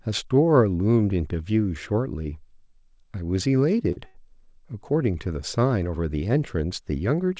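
At 3.92 to 3.98 s and again at 4.06 to 4.17 s the speech shows a short stall from a late packet. The jitter buffer ran dry, so the receiver stretched the last sound, by about 45 ms and then 82 ms, and resumed where it left off with nothing lost. Each sounds like a syllable held unnaturally long with a slight buzz or dip. On a spectrogram the harmonics run flat and smeared, and the waveform shows repeated cycles. The band stops at 8 kHz, consistent with a G.722 call path.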